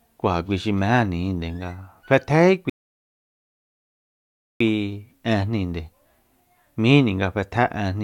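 At 2.70 seconds the speech stops dead and goes silent. This is a rebuffering stall. The player used up the audio it had downloaded and had to wait for more. The silence lasts until 4.60 seconds, about 1.9 seconds in all. Then the speech picks up at the exact point where it broke off. No audio is missing. The gap simply adds time to the playback.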